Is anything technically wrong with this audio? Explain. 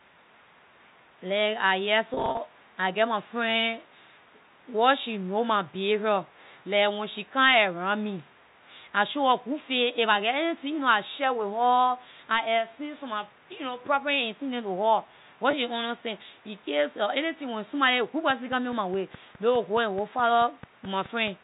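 Yes, there are two kinds of fault.

Packet loss with pitch repetition occurs from 2.14 to 2.38 s and again at 15.51 s. In the first stretch about 150 ms of audio is missing, scattered across 240 ms, with no gap longer than 40 ms. The second is a single 20 ms gap. The receiver fills each hole by repeating the last pitch period. Because every gap is short, this sounds like brief held, buzzy fragments rather than dropouts to silence, a stutter most noticeable in the first stretch.

A train of clicks runs from 18.30 to 21.29 s: around fifteen sharp, similar pulses at a steady 4.7 per second, peaking roughly as loud as the speech itself. They tick through the pauses as well as over the sound. The even spacing and uniform shape point to a likely cause in electrical interference from nearby equipment or a faulty connection or power supply. The telephone-band G.711 coding underneath is working as expected.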